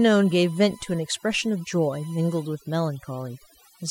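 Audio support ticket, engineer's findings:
Overdone noise removal, whole clip. Background drops and breaks up into twinkly specks. Denoiser set way too hard: it's pulling individual bands down or out whenever they sit near its noise estimate, and quiet speech detail goes too. Back it off.

USB whine, 0 to 2.51 s. Steady 1 kHz tone, about 30 dB under the speech, then gone. Probably an interface on USB: 1 ms frame current leaking through power or ground. Check grounding or isolate the bus.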